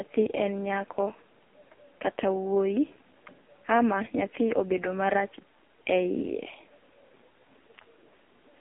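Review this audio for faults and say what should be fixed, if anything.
AMR narrowband mobile codec throughout. Nothing passes above 3.5 kHz. The heavy buzz fits the 5.15 kbps mode. Prevent it by capturing wideband audio, not phone-line audio.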